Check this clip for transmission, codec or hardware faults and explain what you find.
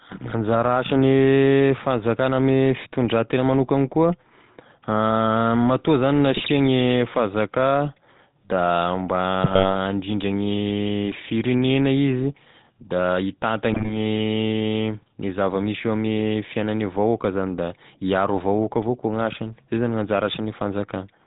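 Two faults are audible: GSM full-rate coding across the whole recording, and three short bursts of GSM bit errors.

GSM full-rate codec, throughout: the voice is rebuilt from a vocal-tract filter driven by sparse, regularly spaced pulses, with nothing kept above 4 kHz. The thin, buzzy, gravelly texture fits a 13 kbps full-rate stream, and the damage is plainly audible.

GSM bit errors, at 6.36–6.51 s, 9.44–9.72 s and 13.72–13.93 s (the last right after "gne firegnena izy da"): corrupted filter, pitch and gain values reach the decoder, so several consecutive frames come out with warped spectra or jumps in level, heard as squawks, pops and gargling.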